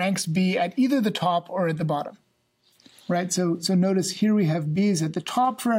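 Nothing here stands out as a technical fault; the audio just runs along without any glitch worth pointing to.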